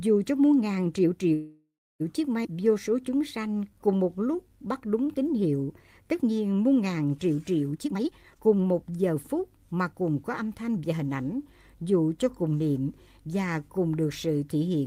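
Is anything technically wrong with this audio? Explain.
Yes, there are four faults, all tied to uneven packet timing.

From 1.33 to 2.02 s there is a call audio freeze. The last sound carries on as a fading buzz for about 0.67 s, the final 290 ms of it silent, before the audio resumes where it stopped. The likely cause is delayed packets emptying the jitter buffer. A spectrogram shows a smeared, decaying band followed by a blank gap.

From 2.44 to 2.47 s comes a skip ahead. Roughly 0.3 s of audio was dropped while later packets were already waiting, so playback jumps forward with almost no gap. The waveform shows an abrupt splice where the envelope before and after does not line up.

From 2.53 to 5.43 s there is a jitter buffer slow-down. The receiver repeated pitch periods and pause fragments to rebuild its reserve, adding 259 ms and running at 91% speed with unchanged pitch. Sounds are drawn out. 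The spectrogram shows stretched formant segments with harmonics kept at the same spacing.

From 7.72 to 11.40 s there is a jitter buffer speed-up. To shed excess delay, the receiver cut short pieces of one or a few pitch periods, removing about 0.7 s and playing at 118% speed. The sound feels hurried, and the spectrogram shows compressed events at the same pitch.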